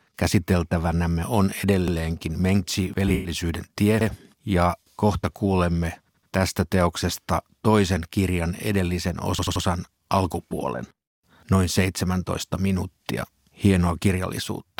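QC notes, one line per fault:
1.88, 4.01, 6.14 and 9.39 s, repeated buffer: an 85 ms slice of speech plays again with a hard join, twice at 1.88 and 4.01 s, three times at 6.14 s and four times at 9.39 s, giving stutters that lengthen. Late audio made the device replay its last buffer, which fits a 4096-sample buffer. Nothing is skipped.
3.08–3.30 s, AAC frame loss with concealment: a smeared, noisy, phasey patch of about 170 ms. About 128 ms of coded audio went missing in scattered gaps, the longest around 100 ms, and the decoder rebuilt each gap from the last good spectrum.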